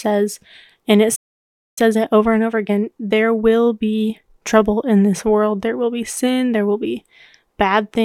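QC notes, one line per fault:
1.15–1.78 s, playback stall: the speech cuts to silence mid-flow for about 0.61 s, then resumes from where it broke off. The player likely ran short of data or had its output thread blocked, so nothing reached the output until it recovered.
1.78–4.78 s, time-compressed catch-up: right after the gap, speech runs about 1.1 times fast at unchanged pitch until just before "in this world". The player trims its backlog by cutting and cross-fading short pieces.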